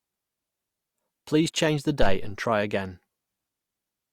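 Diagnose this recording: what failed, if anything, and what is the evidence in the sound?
A phantom power thump hits the analogue input stage at 2.02 s and lasts until 2.23 s. It falls right after "change the" and before "and try again". The sound is a deep, low-frequency thud that peaks at about -9 dBFS. Its decay takes about 47 ms. That shape points to a supply being switched on a live input. The sudden voltage step passes through the coupling capacitors and reaches the preamp as one low, heavy pulse.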